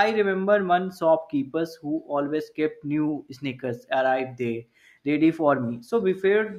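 A speech recording with no technical fault to be heard anywhere in it. There is nothing here that needs a time stamp or a cause.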